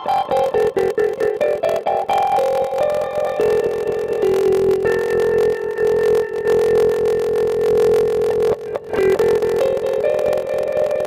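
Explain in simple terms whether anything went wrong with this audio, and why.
A steady 43 Hz buzz runs throughout, and everything plays at 0.86 times normal speed while keeping its tone. This is a block size mismatch (padded): short blocks topped up with silence, fitting 1024-sample reads.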